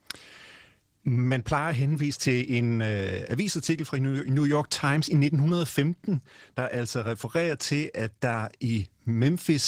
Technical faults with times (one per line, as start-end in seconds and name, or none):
0.00-9.67 Opus voice compression